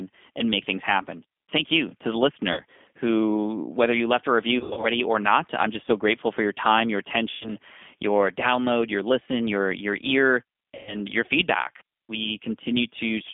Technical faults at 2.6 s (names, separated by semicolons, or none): G.729 codec; VoIP packet loss concealed by the speech codec